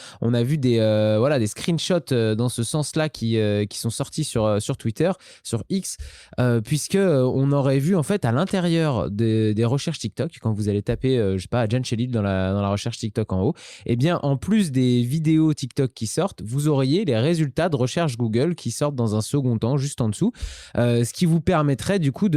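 Nothing technically wrong turns up anywhere in this stretch of speech, so there are no problem spots to point to.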